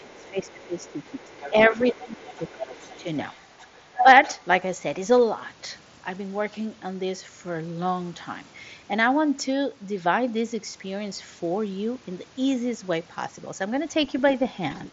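From the start to 4.47 s, the echo canceller likely failed to remove all of the far end's loudspeaker playback from the microphone, so the other side's voice leaks through, roughly 20 dB below the talker. Over the same opening, from 0.0 to 3.05 s, the canceller, likely confused by both sides talking at once, turns the talker down as well. This is speech suppressed in double talk, with dips of up to about 15 dB adding up to around two seconds. A milder dip of about 5 dB follows from 3.6 to 4.06 s.

Near the end, faint scraps of the other side's voice leak through again, at 14.07 to 14.22 s, about 30 dB down, and from 14.72 s to the end, about 35 dB down. Both are quiet and brief.

Throughout, the Bluetooth mSBC headset link caps the band near 7.7 kHz, with only light coding grain.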